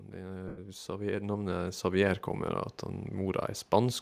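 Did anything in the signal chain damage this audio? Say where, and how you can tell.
Yes. Call processing applied automatic gain rising. From 0.14 s to 2.29 s, the speech and the background noise swell together by about 9 dB. The gain control judged the input too quiet and raised its gain slowly.

Lost LE Audio frames damaged the Bluetooth link. From 0.48 s to 0.58 s, about 98 ms of speech turns into a noisy smear. That length fits roughly thirteen 7.5 ms frames. The decoder repeated the last spectrum with random signs to cover the gap.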